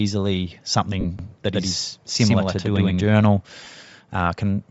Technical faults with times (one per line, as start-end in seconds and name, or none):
0.00-4.70 Bluetooth LC3 compression
1.01-1.05 lost LE Audio frames
1.19-3.05 doubled audio track
3.64-3.66 lost LE Audio frames